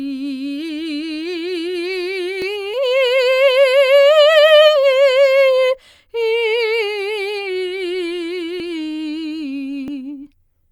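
At 2.42 s there's a small jump forward in the music, roughly 20 ms gone and the two sides butted together with no gap. That's most likely a dropped buffer (overrun), where the program didn't pull its samples before the hardware wrote over them.

Then at 2.73 to 2.75 s comes a skip ahead. About a second of music just vanishes and playback lands further on with no silence in between. It sounds like the audio ran behind, and the stretch that had piled up was dumped in one go to catch back up.

Right after, from 2.83 to 5.02 s, there's a jitter buffer speed-up. The music plays at 111% speed with the pitch unchanged, so it feels rushed and the tempo drifts. Tiny pitch-period slices were trimmed over and over, around a third of a second in total, to shrink the excess buffered delay.

The same jump comes back twice more, at 8.6 s with about 40 ms missing and at 9.88 s with about 20 ms missing. 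Each is a short lurch forward with no silence in between, which again fits the capture side failing to keep up with the hardware.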